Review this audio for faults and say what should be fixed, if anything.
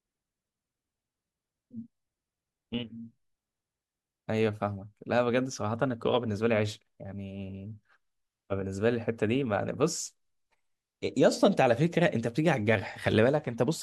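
Nothing to fix: no faults are audible anywhere in the recording.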